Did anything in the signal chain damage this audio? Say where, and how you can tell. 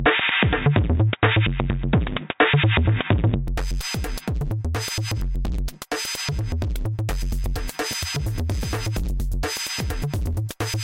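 Yes. Until 3.48 s the sound stops at 3.8 kHz, with faint added hiss and a level a few dB off, then clears without a gap. That is likely the input switched to a poorer device at the driver stage; codec band-limiting wouldn't also shift level and noise.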